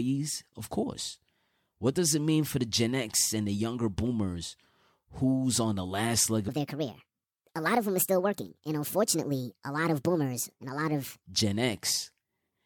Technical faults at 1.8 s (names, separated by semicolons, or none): none